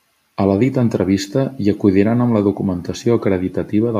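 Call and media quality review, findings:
No audible defects found in this speech recording.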